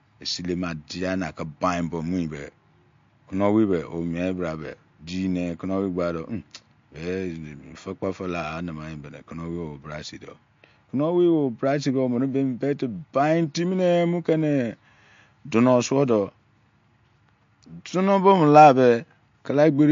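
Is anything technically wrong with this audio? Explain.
Yes. Throughout the speech the sound is watery and swirly, with nothing above 7.2 kHz. Likely MP3 compression at a low bitrate, consistent with about 48 kbps: short of bits, the encoder cuts the treble and drops weak frequency lines that flicker between frames.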